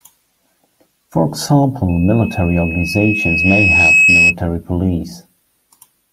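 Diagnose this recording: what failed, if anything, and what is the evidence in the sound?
The playback loudspeaker leaked into the microphone with loop gain above one, causing loudspeaker feedback squeal: a 2.6 kHz tone swells over roughly two seconds, 1.89 to 4.35 s.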